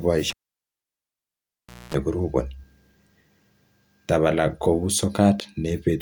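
A live cable is pulled out and pushed back in between 0.30 and 1.94 s. A pop marks the disconnection, then the speech drops to near silence for about 1.59 s. A 60 Hz mains buzz lasts about 232 ms while only the plug tip makes contact, and a second pop comes as the signal returns.

At 3.42 s a single sharp click cuts through the speech, most likely from dropped samples. A tiny fraction of a millisecond of the stream is missing, so the waveform leaps straight to a later value and that step sounds as a click.

Between 5.39 and 5.42 s the audio jumps ahead with a brief garbled disturbance, likely a broken MP3 bit reservoir. Frames of about 24 ms were cut out, so the frame after the gap reached back for borrowed data and decoded bytes belonging to another frame.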